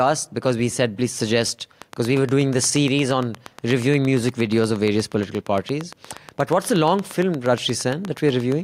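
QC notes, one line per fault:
1.82–8.53 s, train of clicks: starting just after "we said please suggest", a steady ticking runs over the speech almost to the end, about 8.5 clicks per second at a regular spacing, roughly fifty in all. The pulses share much the same shape and peak about 10 dB above the speech, so they stand out as a mechanical tick. The likely cause is interference from nearby equipment or a faulty connection or power supply injecting a repeating pulse.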